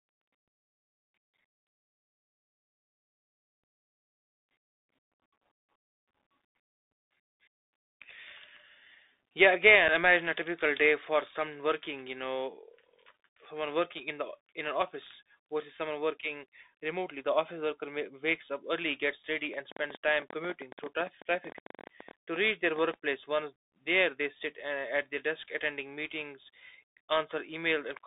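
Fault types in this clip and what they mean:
Bluetooth CVSD headset codec: The speech runs through the narrowband headset codec, which encodes each sample as a single up-or-down bit at 64 kbps, so the line holds only about 200 Hz to 3.7 kHz. Its damage is plainly audible here: a granular hiss sits under the speech, s sounds turn scratchy, and loud bright moments distort as they outrun the adapting step. Unlike a lossy wideband codec, it gives no swirling or warbling, only a steady, gritty band limit.
Unconcealed Bluetooth headset packet loss: At 9.88 s, just before "imagine a typical day", the speech drops out for about 7.5 ms. That length fits a single lost voice packet between headset and phone, replaced by silence or an idle pattern rather than smoothed over. The hole has abrupt edges, so it lands as a brief gap, and the speech resumes slightly quieter for a moment. It is a single isolated event, set apart from a click train by being a gap in the audio rather than an added pulse.
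Train of clicks: From 19.54 s to 22.95 s, right after "up early gets ready", around fifty similar clicks ride over the sound at about 13.5 per second, spaced unevenly and peaking roughly 5 dB above the speech. They continue through pauses, so they are added pulses rather than holes in the signal, which separates them from packet loss. Interference from nearby equipment or a faulty connection or power supply is the likely cause.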